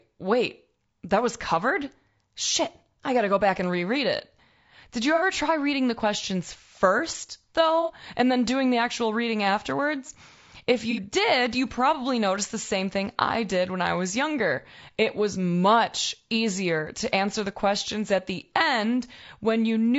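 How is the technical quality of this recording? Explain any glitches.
Technical quality is compromised by plainly audible codec damage and three brief dropouts.

Throughout, the speech sounds rough and grainy with a synthetic top band, likely from low-delay AAC compression (AAC-ELD) at a bitrate around 32 kbps.

AAC frame loss with concealment occurs at 5.15–5.22 s, 7.82–7.92 s and 10.91–11.00 s. Each patch is about 60 ms of smeared, noisy sound where the decoder rebuilt the missing frames from earlier audio.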